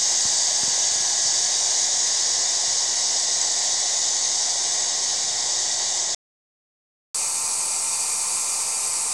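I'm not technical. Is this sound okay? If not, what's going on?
No. At 6.15 s the sound cuts out for about one second, a playback stall, likely because the player ran short of data. It resumes at 7.15 s. From 7.15 s to the end, catch-up at higher speed: the player runs 1.25 times faster to recover lost time, so pitch rises by roughly four semitones.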